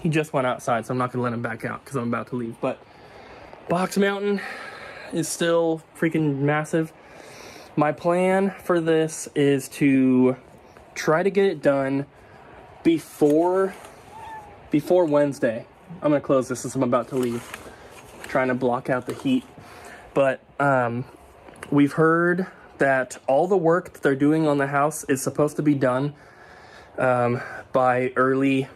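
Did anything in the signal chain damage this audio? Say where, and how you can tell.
No, no chain damage audible.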